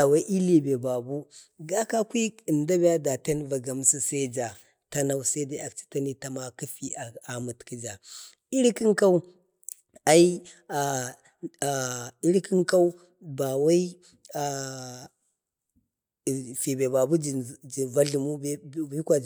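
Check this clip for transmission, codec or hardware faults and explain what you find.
Nothing in the speech points to a transmission, codec or hardware fault.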